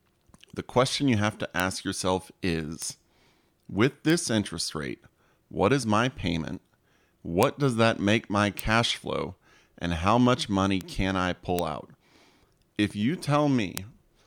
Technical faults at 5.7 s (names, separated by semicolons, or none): none